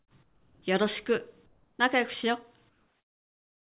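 The quiet stretches at 0–0.11 s, 0.23–0.62 s, 1.46–1.79 s and 2.69 s to the end lose their real background and turn into flat, featureless hiss, likely comfort noise in place of the background from discontinuous transmission. The level drops by about 14, 5, 2 and 4 dB. Nothing sits above 4 kHz, which fits a G.711 call path.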